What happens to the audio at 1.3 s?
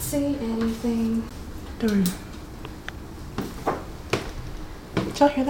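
At 1.29 s there is a CD skip. The laser has jumped to another turn of the disc's spiral. Playback mutes for about 15 ms, giving a brief tick. The sound then resumes abruptly from a different point in the track.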